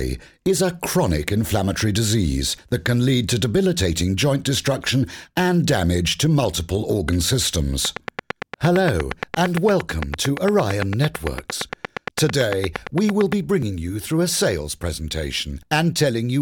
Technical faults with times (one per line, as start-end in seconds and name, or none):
7.85-13.33 train of clicks
13.62 dropped buffer (overrun)